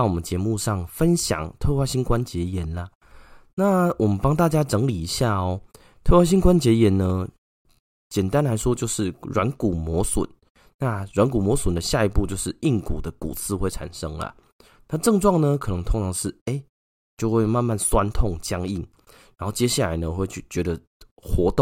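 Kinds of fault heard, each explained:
No technical faults can be heard in this recording.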